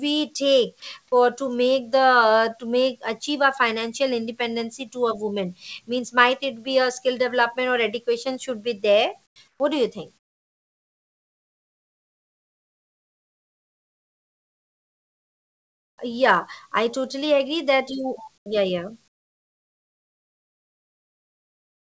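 At 9.26 s, comfort noise in place of the background appears for 0.1 s, about 19 dB quieter. It returns at 9.48 s for 0.12 s and at 18.38 s for 0.08 s, each about 4 dB down. Longer stretches run from 10.18 to 15.98 s and from 19.08 s to the end, about 27 to 28 dB lower. In these pauses, the real background becomes flat, featureless hiss. The likely cause is discontinuous transmission, with the receiver synthesising filler. Throughout, nothing is heard above 8 kHz.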